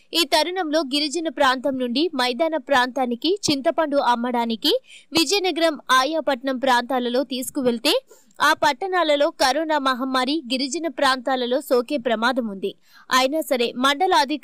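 A loud pop at 5.17 to 5.19 s: a single sharp crack sits well above the surrounding audio, roughly 15 dB higher, while the sound carries on beneath it. The likely cause is a sudden voltage pulse, from a plug, switch, static discharge or driver glitch, entering the signal chain.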